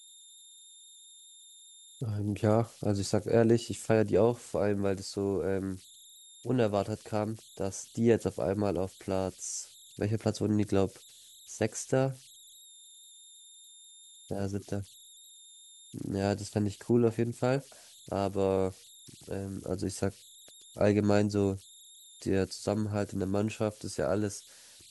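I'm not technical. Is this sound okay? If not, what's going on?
No. All through this speech recording there's a high whistle, somewhere around 4 kHz, coming from converter idle tones. The converter chip slips into a repeating pattern when the sound going into it is very quiet, and that pattern comes out as a thin tone. Unlike steady hiss, it has a definite pitch. Unlike mains hum, it's high rather than low, and it stands out most in the pauses between speech.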